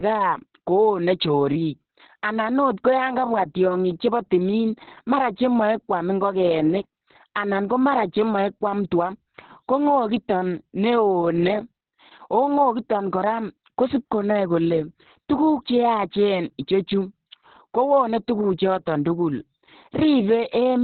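From start to finish the speech carries heavy Opus voice compression: nothing above about 4.3 kHz, so it's muffled, hoarse and a bit robotic. The narrowband, coarsely coded sound fits the SILK coder at a bitrate around 6 kbps.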